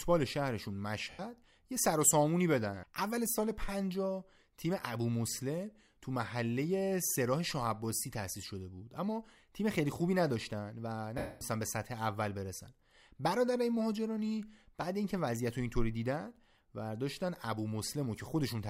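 At 1.11 s and again at 11.18 s there are lost LE Audio frames. The decoder smears the last spectrum with random signs for 80 ms, then 230 ms, fading the longer gap toward silence.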